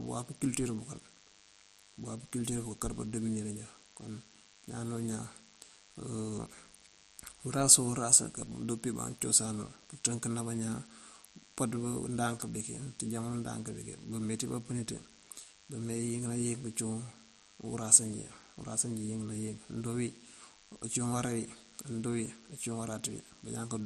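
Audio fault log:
throughout, DECT cordless phone buzz: a steady, thin, harmonic-rich buzz sits roughly 25 dB below the speech. A nearby DECT handset or base station sends a radio burst every 10 ms, and the audio circuitry rectifies those bursts into a 100 Hz buzz.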